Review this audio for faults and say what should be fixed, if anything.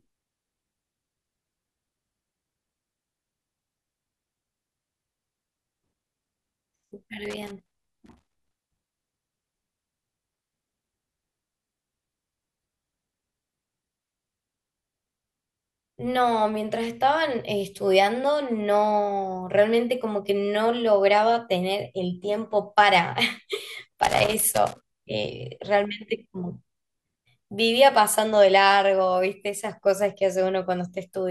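A worn or dirty contact in the cable or connector is making and breaking as it shifts, chopping the signal. The result is loose connector crackle, irregular scratchy bursts over the speech from 7.25 to 8.97 s and 24.03 to 24.83 s. Replace or clean the connector and secure the cable so it cannot move during recording.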